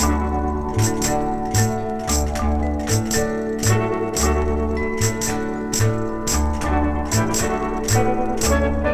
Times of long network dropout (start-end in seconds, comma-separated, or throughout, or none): none